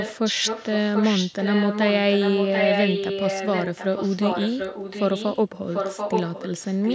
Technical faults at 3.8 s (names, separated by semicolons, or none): echo leak